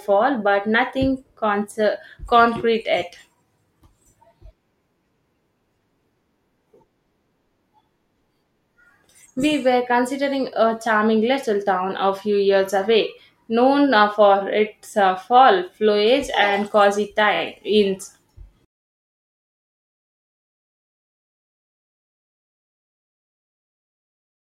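Repeated frames from 17.34 to 17.39 s, just after "fall foliage and cozy": a single 24 ms slice of the speech plays twice more, which fits one compressed frame being resent. The result is a brief stutter, lengthening the audio by 48 ms.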